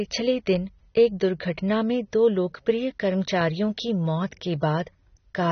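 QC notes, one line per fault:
Throughout, AAC compression. Nothing is present above 6.3 kHz, so the speech sounds dull and boxed in. The codec damage is plainly audible. Sibilants turn fizzy and smeared, and held sounds take on a warbling texture. The likely cause is AAC-LC coding at a low bitrate, around 24 kbps. At that rate the encoder drops the top of the band to save bits. It coarsely quantises what remains, which leaves gaps and swirl in the spectrum.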